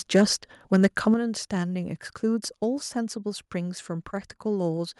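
From 0.15 to 0.23 s, and again from 0.73 to 1.08 s, the speech peaks break up with a harsh, gritty crackle. This is microphone overload, likely from an input set about 4 dB and then about 6 dB too hot, so the waveform tops are flattened at the converter's ceiling. In the first burst a fair share of samples sit at the limit; in the longer second one only a small fraction do. Unlike a limiter or compressor, which would pull loud syllables down smoothly, this adds distortion that rides only on the loudest moments.

At 1.14 s, just after that second distorted stretch, the level of the speech and the background together falls abruptly by about 7 dB. A smaller drop of about 2 dB follows at 4.77 s. This is the microphone volume stepped down, likely the call software cutting the device's input gain in a single move after detecting the overload. What distinguishes it from automatic gain control is the instant step in level rather than a gradual glide, and the fact that the noise floor drops along with the speech.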